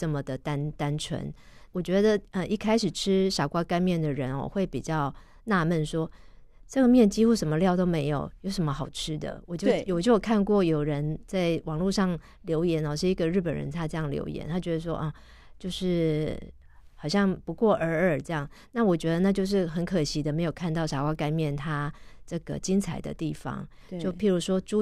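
No technical faults can be heard anywhere in the speech recording. There is nothing to mark at any point in time.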